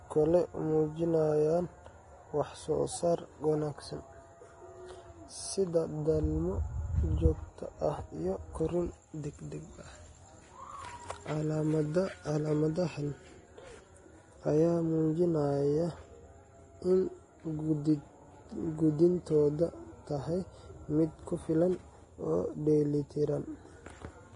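Speech throughout, with heavy coding damage: nothing above 10.6 kHz, grainy hiss where treble detail should be, and smeared consonant onsets. This is likely Vorbis compression at a low bitrate, near 29 kbps, quantising the residue so coarsely that detail turns to noise.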